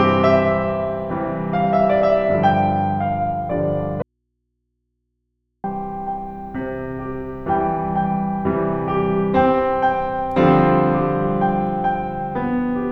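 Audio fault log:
4.02–5.64 s, audio dropout to a faint residue: the music cuts off abruptly mid-flow and returns just as suddenly after about 1.6 s. The gap is not silent but holds a low mains hum roughly 55 dB below the programme level. The hard edges at both ends rule out a pause or fade. The likely cause is a brief loss of the source feeding a path that stayed live, so the open input picked up hum.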